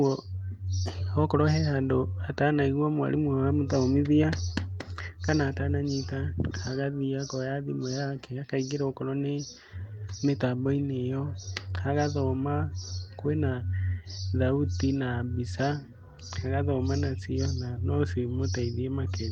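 Nothing stood out on listening to this speech recording.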